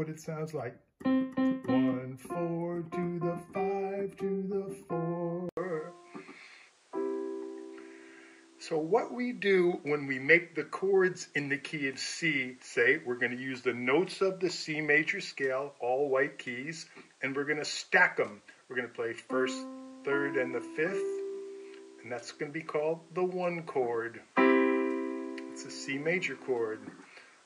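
At 5.49 s the audio drops out for 80 ms, then turns duller with nothing above 10.5 kHz, a level shift of a few decibels and a new faint noise floor until the end, likely an input switched to a poorer device.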